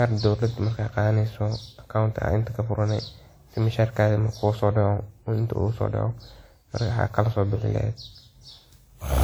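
From start to finish the speech has a swirly, smeared and hollow quality, with consonant attacks blurred and a watery texture that seems worse than the bandwidth suggests, since content still reaches about 20.1 kHz. That points to generation loss, likely from the audio being decoded and re-encoded about seven times with WMA at a rate around 96 kbit/s. Each pass requantised the sound on a shifted frame grid, so noise and spectral gaps accumulated.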